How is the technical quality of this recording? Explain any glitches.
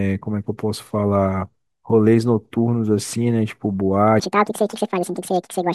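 The recording has one clear glitch. From 4.20 s to the end at 5.74 s, the speech is a section at the wrong speed, running 1.81 times too fast, likely from playback against a mismatched clock. Pitch rises by roughly ten semitones, sounding chipmunk-like and rushed. A spectrogram shows harmonics jumping upward, while the waveform's syllables become compressed.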